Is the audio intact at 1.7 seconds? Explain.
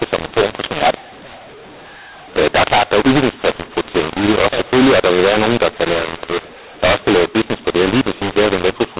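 No. At 1.7 seconds you're inside a mu-law and A-law mix-up that runs through the whole clip: the speech was coded as A-law but decoded as mu-law, so levels come out scrambled. It sounds harsh and gritty, with quiet stretches filled by noise.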